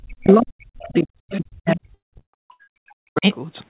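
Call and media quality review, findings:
Speech suppressed in double talk, 0.0–3.26 s: level pumps down, up to about 40 dB at its deepest, over about 3 s. Likely echo canceller mistaking near-end speech for loudspeaker echo during overlap and attenuating both.

Other side's voice leaking through, faint second talker at 0.25–0.34 s (about 15 dB below speech), 0.79–1.03 s (about 30 dB below), 1.31–1.37 s (about 15 dB below). Likely residual loudspeaker echo the canceller left in the microphone signal.

Repeated packet loss (robotic sound), 1.76–2.79 s: choppy stretch with holes, the longest 178 ms, about half the span patched by extending prior sound. Jitter buffer concealment on a G.711 mu-law path, 4 kHz band limit.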